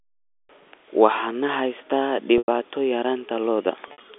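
At 2.38 to 2.48 s the speech holds on a buzzy, repeated tone that fades to silence, then returns. From 3.88 to 3.98 s there are choppier stutters. Both are packet loss with pitch repetition: the receiver looped the last pitch period to cover 100 ms and then 80 ms of lost audio. In the second event, the longest gap ran 60 ms.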